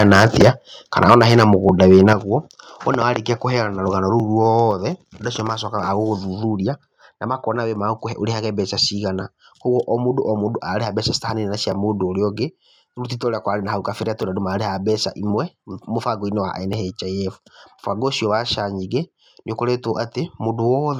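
Right from the start, 0 to 0.5 s, 0.97 to 1.54 s and 1.81 to 2.13 s, peaks get flattened with a harsh crackle, likely microphone overload running about 9, 9 and 5 dB over, with a few percent of samples clipped. At 1.14 s and 2.13 s the level suddenly drops by about 4 and then 8 dB, likely the microphone volume being stepped down after those distorted peaks. Then there's a little stutter-click at 1.69, 4.20, 6.70, 9.21, 11.72, 14.23, 16.73 and 19.24 s. That's overlapping chunks: every 2.5 s, about 7 ms gets replayed at the join.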